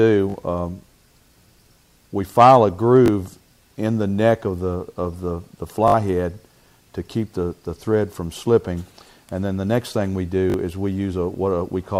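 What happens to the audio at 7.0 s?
Nothing goes wrong at 7.0 s; the audio plays through that moment intact.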